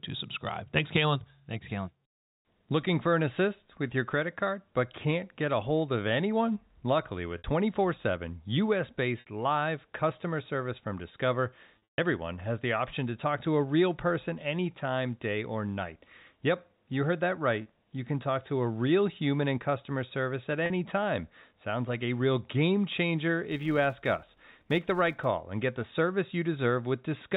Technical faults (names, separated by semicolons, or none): packet loss with pitch repetition; filter restarted on every block